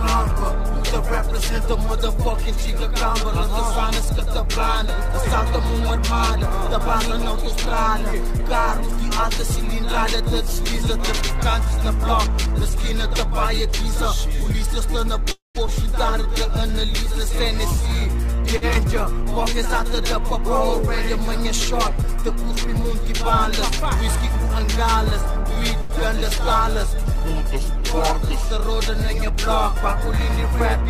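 At 15.31 s the sound stops moving forward: the last moment is drawn out as a fading buzz that sinks into about 150 ms of silence, and at 15.58 s the audio resumes from where it broke off, nothing lost but roughly a quarter-second gap inserted. This is a call audio freeze, likely caused by packets held up in transit so the jitter buffer emptied and the receiver could only extend what it last had.

Almost immediately, at 15.67 s, playback lurches forward with hardly any pause. About a tenth of a second of audio is gone, and the material either side of the cut is butted together. This skip ahead happens because later audio was already queued when a stretch went missing, so the receiver discarded it and jumped on, clawing back part of the delay the freeze had added.

From 16.23 s to 20.58 s the audio drags very slightly, running at about 99% speed with unchanged pitch, some sounds a touch elongated. 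This jitter buffer slow-down comes from the receiver repeating single pitch periods and slivers of pauses to rebuild its reserve, adding 66 ms over those four seconds.

Inside that stretch, at 18.56 s, one sound is held too long for about 54 ms, with a faint buzzy edge, before continuing intact. This short stall from a late packet arises when a packet misses its slot and the receiver stretches the previous sound until it arrives. Right after, at 18.74 s, a second skip ahead drops about 70 ms and joins the two sides almost seamlessly, trimming the delay back again.

A further short stall from a late packet at 25.81 s holds a sound for about 84 ms, heard as a brief smeared sustain with a slight dip, after which the audio picks up exactly where it paused.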